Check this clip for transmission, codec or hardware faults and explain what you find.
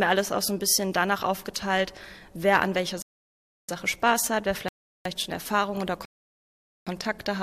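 There are three rebuffering stalls. The first runs from 3.02 to 3.69 s, the second from 4.68 to 5.05 s, and the third from 6.05 to 6.87 s. The player drained its store of downloaded audio and halted until fresh data arrived. Each time the sound drops abruptly to silence. Playback then picks up at the exact point it stopped. No audio is lost. The gaps add about 0.67 s, 0.37 s and 0.81 s of dead time.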